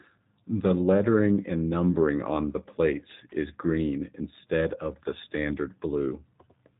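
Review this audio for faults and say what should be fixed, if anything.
G.729 codec damage runs through the whole speech clip: nothing above 3.8 kHz, and a rough, synthetic texture from pulse-coded frames, consistent with 8 kbit/s. Route the call over a wideband codec such as G.722 or Opus instead.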